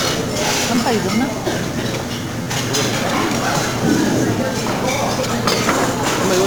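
A recording of everyday sounds, carried throughout by heavy 1-bit DFPWM compression. Each sample is reduced to a single up-or-down step of an adaptive level, so strong broadband quantisation noise rides on everything. The whole clip sounds fuzzy and crackly, with the treble buried under hiss. Unlike transform codecs such as MP3, there is no swirling or warbling: the grit is steady and constant, and it points to a stream of about 48 kbps. The clip also has two repeated buffer faults, at 0.76–0.78 s and 2.43–2.46 s. In each, an 11.6 ms slice, which fits a 512-sample buffer, plays again back to back: two extra times in the first, three in the second. Because the repeats are so short, they come across as a brief buzz at roughly 86 Hz rather than an audible stutter. Essentially no audio is lost, and the identical repeated slices with hard joins are what set this apart from a dropout or a single click.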